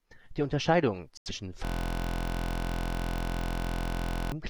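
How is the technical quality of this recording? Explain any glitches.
The recording has two clear faults, and the second takes up much of the clip.

From 1.17 to 1.31 s there is a digital broadcast dropout. The speech cuts out abruptly into silence. The receiver stopped getting clean frames and muted until valid ones arrived. The hole fits about two lost frames. The speech sent during the gap is simply missing. When the signal returns, the sound picks up mid-flow with no trace of the lost part.

From 1.65 to 4.32 s comes a system hang loop. The computer stalled while the sound hardware kept replaying one stretch of its buffer. The repeated piece is 23.22 ms long, which fits a 1024-sample buffer. It cycles at 43.1 Hz, well over a hundred times. At that length the speech turns into a steady, flat buzz. Around three seconds of real audio are lost behind it.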